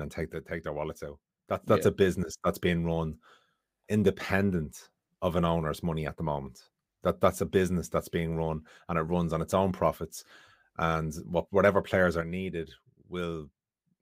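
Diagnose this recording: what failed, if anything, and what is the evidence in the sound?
Speech steps down abruptly by about 6 dB from 0.34 to 1.68 s, between "and take" and "that's yeah", then again from 12.21 s to the end. Likely one channel drops out in the analogue wiring, so the mono sum carries only half the shared signal.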